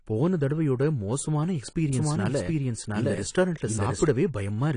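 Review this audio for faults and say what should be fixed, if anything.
AAC compression, throughout: the sound is dull and smeared with nothing above about 10 kHz, likely from AAC-LC coding at a low bitrate, around 32 kbps.

Doubled audio track, 1.93 to 4.07 s: a second full-band copy of similar loudness trails about 0.7 s behind, likely from a second capture path, starting and stopping abruptly.

To prevent both, encode at a higher bitrate and make sure only one capture path feeds the mix.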